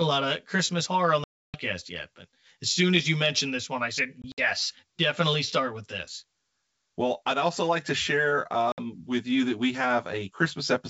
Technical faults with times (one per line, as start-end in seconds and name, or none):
0.00-10.90 channel delay (comb filtering)
1.24-1.57 packet loss on an ADPCM call
4.22-4.40 packet loss on an ADPCM call
8.72-8.79 packet loss on an ADPCM call